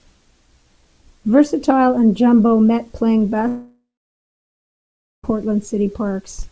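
Speech clip with a long network dropout from 3.48 to 5.25 s, likely caused by incoming packets stopping for about 1.76 s. The receiver stretches the last sound into a buzz that fades, leaving about 1.39 s of silence before the speech resumes with the missing stretch skipped. On a spectrogram this shows as a smeared band that decays into a blank gap. The waveform flattens to near zero through the gap. Across the whole clip the spectrogram also stops sharply at 8 kHz, which fits the G.722 call codec at 64 kbps.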